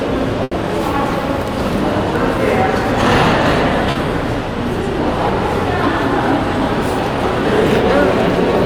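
Everyday sounds carry two network faults. A burst of packet loss at 0.43 to 0.54 s leaves about 80 ms missing: the receiver stretches the last sound into a held buzz or hiss that fades out, then jumps ahead, so that stretch of audio never returns. Short concealed packet loss at 3.91 to 3.98 s hides a 40 ms hole. The decoder extends the preceding sound and crossfades back into real audio, producing a brief smear or wobble where a short sound may vanish.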